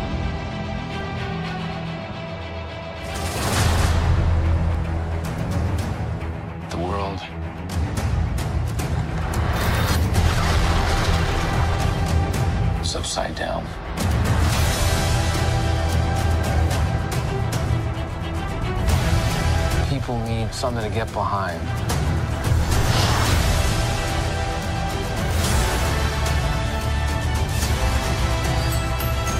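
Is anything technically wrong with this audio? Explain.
Yes. From 1.01 to 4.75 s there is a doubled audio track. A dry copy trails about 300 ms behind, roughly 5 dB quieter, likely from a second, slower capture path.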